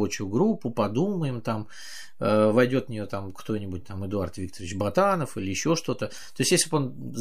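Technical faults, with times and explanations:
Throughout, DC offset: the entire speech waveform sits displaced from zero by a fixed amount, about -39 dBFS, so every sample carries the same constant bias. The shift itself is inaudible, but it appears as a steady component at 0 Hz at the very bottom of the spectrum and eats a small share of headroom on one side of the waveform, leaving the peaks on that side closer to clipping than the signal level alone would suggest.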